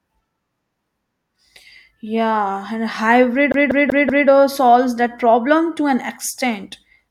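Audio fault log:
3.52–4.28 s, CD stuck on one turn. Right after "and hybrid", a slice of speech about 0.19 s long plays four times over, with a brief mute at each jump. A disc scratch keeps throwing the laser back one track. Normal playback resumes at "or solves that problem".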